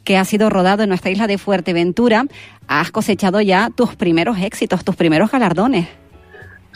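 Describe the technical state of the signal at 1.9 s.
At 1.9 s the signal is intact, with no audible fault at that point.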